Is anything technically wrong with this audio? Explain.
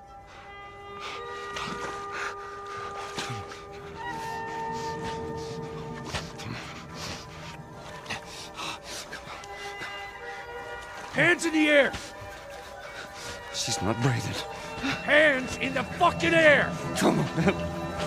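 Yes. At 7.98, 9.58 and 13.48 s the sound jumps forward. This is likely a dropped buffer (overrun): a few milliseconds of samples were overwritten before being read, so the surrounding audio is spliced together with no gap.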